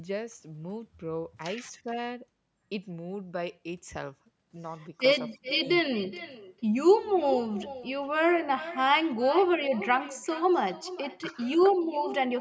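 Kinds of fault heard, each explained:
Echo with no canceller: The far end is playing the call through a loudspeaker, its microphone picks that up, and nothing subtracts it, so the speech returns after the network round trip. Here every phrase is shadowed by a distinct repeat roughly 400 ms later, about 16 dB quieter and thinner than the original. Unlike room reverberation, which smears directly onto the sound, this copy arrives separately after a clear gap and repeats the whole utterance.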